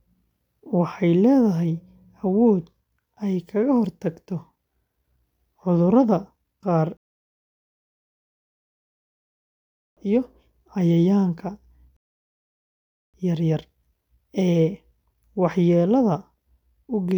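At 6.97 s and again at 11.97 s the speech halts for 3.0 s and 1.2 s, resuming before "iyo cayayaanka" and after "qaar iyo cayayaanka": a rebuffering stall, starved playback pausing. Unlike a dropout, nothing is skipped; time is added.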